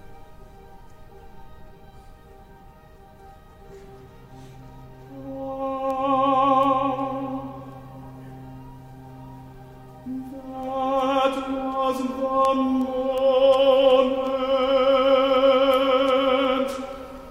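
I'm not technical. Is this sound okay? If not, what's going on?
No, it has word clock ticks: sharp clicks about every 0.4 seconds from 0.45 to 17.18 s, because two connected devices are keeping slightly different time.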